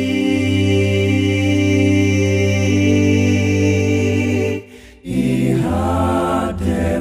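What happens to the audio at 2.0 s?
Nothing goes wrong at 2.0 s: the audio plays through that moment without any dropout, click or other fault.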